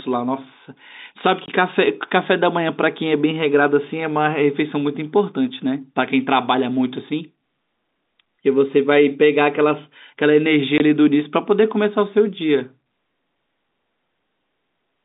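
Speech over a telephone line, band-limited to roughly 200 Hz to 3.7 kHz through G.711 coding, with two short packet loss filled with silence dropouts, at 1.46 to 1.48 s and 10.78 to 10.80 s. Each 20 ms gap fits one lost packet that was replaced with silence, leaving hard edges.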